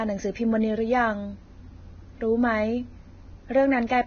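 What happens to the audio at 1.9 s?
At 1.9 s the speech has the same damage heard across the whole clip, likely from heavy Vorbis compression. Nothing reaches above about 6.5 kHz, so the top end sounds dull and cut off. The remaining treble is hissy and grainy. At this low rate, which points to roughly 17 kbps, fine high-frequency detail is coded so coarsely that it turns into noise of similar energy. Tones sound roughened and attacks are blurred.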